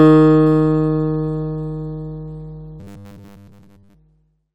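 From 2.80 to 3.94 s, the everyday sounds turn into a rigid, metallic buzz at 100 Hz. This is robotic sound from repeated short buffers. Audio likely arrived too seldom, so roughly 10 ms slices were replayed over and over, covering most of that stretch.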